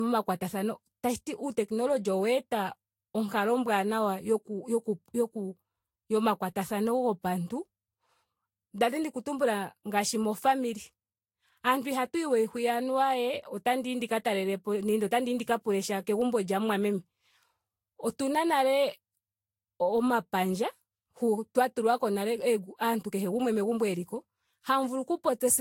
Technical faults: generation loss

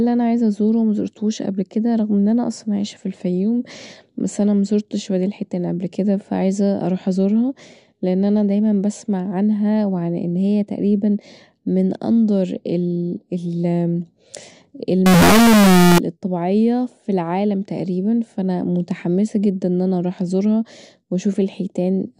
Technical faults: float read as integer

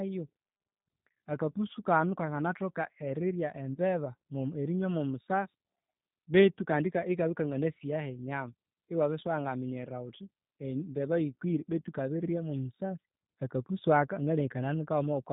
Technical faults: G.729 codec; VoIP packet loss concealed by the speech codec

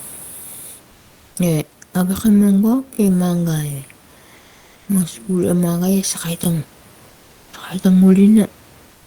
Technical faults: repeated buffer; comfort noise in place of the background

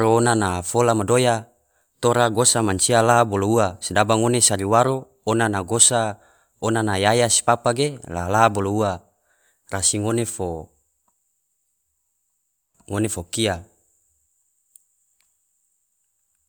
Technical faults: none

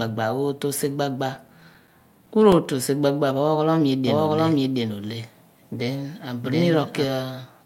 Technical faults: CD scratch ticks; doubled audio track

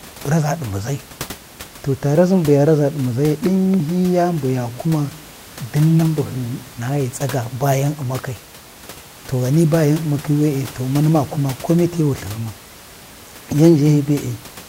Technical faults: none

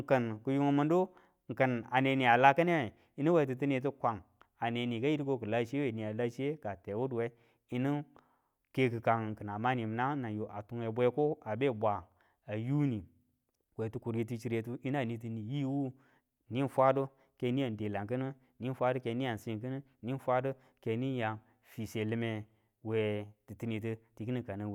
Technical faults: none

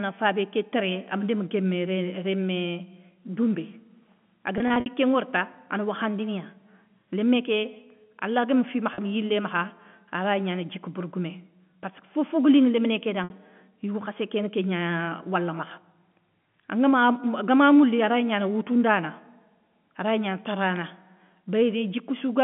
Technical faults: packet loss with pitch repetition

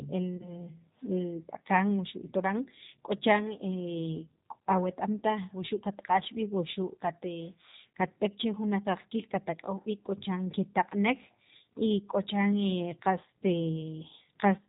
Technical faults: G.729 codec; VoIP packet loss concealed by the speech codec

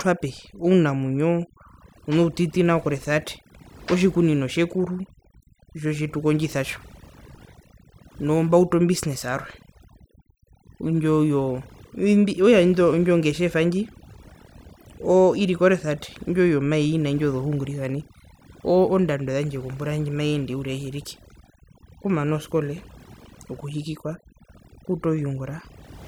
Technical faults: overdone noise removal

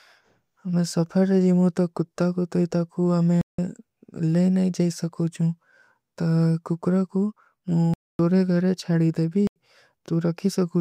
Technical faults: block of digital silence

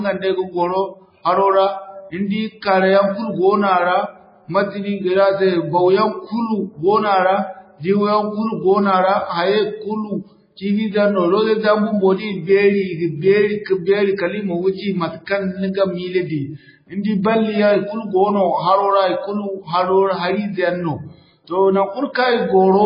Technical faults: MP3 compression

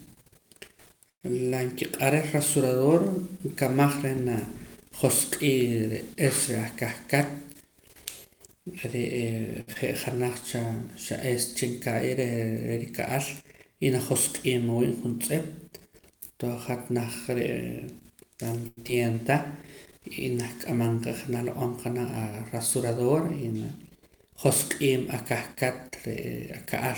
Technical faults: call audio freeze; jitter buffer speed-up; short stall from a late packet; short concealed packet loss

